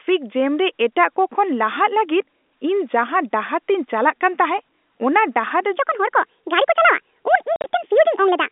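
A section at the wrong speed runs from 5.78 s to the end of this telephone-band speech clip: playback jumps to 1.55 times the original rate, so the voice turns hurried and lifts by roughly seven semitones at once, likely from the section being fitted to the wrong clock. Packet loss filled with silence strikes between 7.56 and 7.64 s, where about 70 ms of audio drops out across an 80 ms stretch, the longest hole lasting 50 ms; the gaps open and close abruptly, which fits 10 ms packets. G.711 telephone coding is audible in the narrow line band from 250 Hz to 3.6 kHz.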